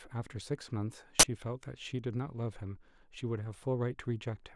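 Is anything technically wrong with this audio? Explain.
Yes. At 1.20 to 1.24 s the speech is interrupted by an uninitialised buffer fault: a burst of roughly 42 ms, which fits a 1024-sample block, was played before any audio had been written into it, so whatever stale data sat in that memory was output as samples. It is heard as a sudden, loud burst of digital noise. On a waveform it appears as a rectangular slab of jagged samples; on a spectrogram, a bright vertical band spanning the whole frequency range.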